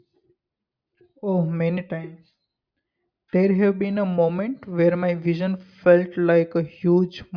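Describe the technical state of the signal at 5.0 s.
At 5.0 s the speech signal is intact, with no dropout, distortion, glitch or other fault to be heard at that moment.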